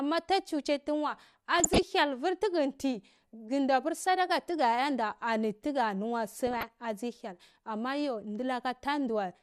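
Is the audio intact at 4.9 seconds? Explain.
No. At 4.9 s, as throughout the clip, the speech is dull and gurgling, likely from MP2 compression at a low rate near 80 kbps. Starved sub-bands switch off and flicker, leaving coarse granular grit rather than the steady clean roll-off of plain low-pass filtering.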